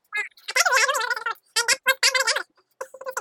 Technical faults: wrong sample rate

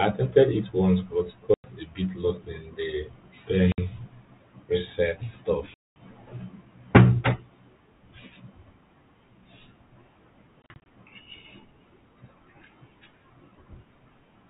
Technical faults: packet loss filled with silence

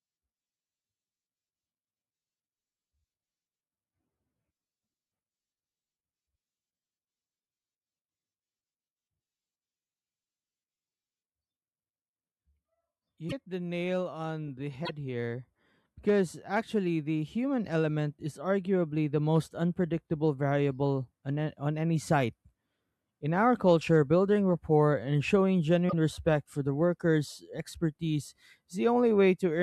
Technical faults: broken MP3 bit reservoir

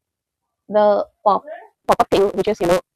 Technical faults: block size mismatch (truncated)

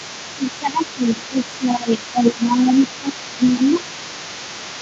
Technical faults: other side's voice leaking through; speech suppressed in double talk

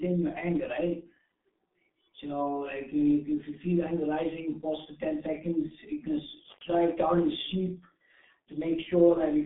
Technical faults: G.723.1 codec

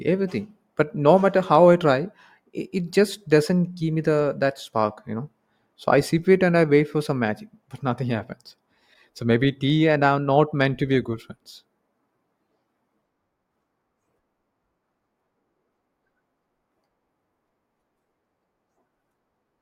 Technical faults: none

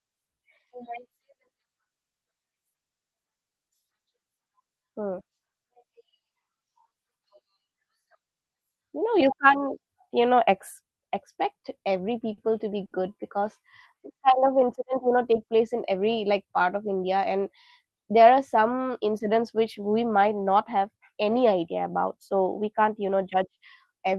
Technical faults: short stall from a late packet; jitter buffer speed-up

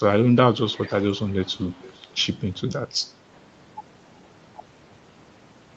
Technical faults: echo leak

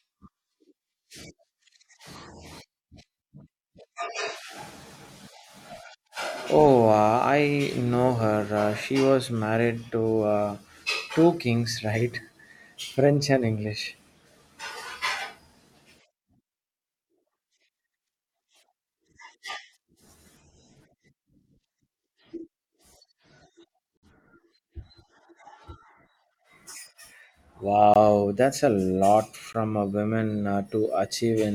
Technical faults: Bluetooth stall

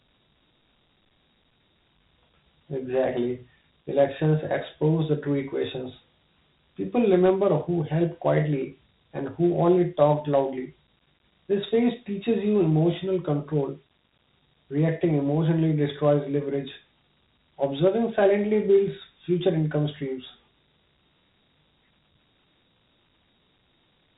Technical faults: Dialogic VOX ADPCM

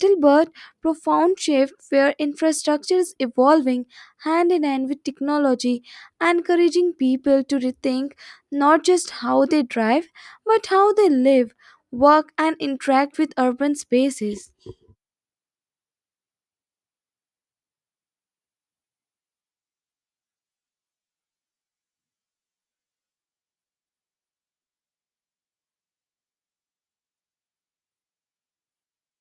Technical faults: none

